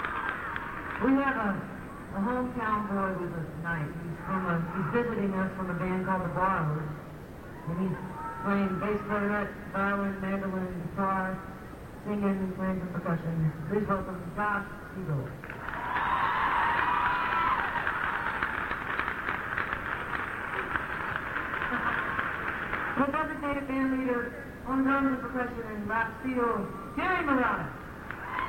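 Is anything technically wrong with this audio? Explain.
No, nothing technically wrong can be heard in this audio, and the signal stays steady and intact throughout.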